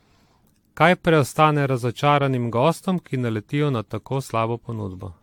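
Generation loss runs through the whole speech clip. It sounds swirly, smeared and hollow. Nothing sits above 19.2 kHz. This likely comes from about seven 96 kbit/s AAC-LC re-encodes.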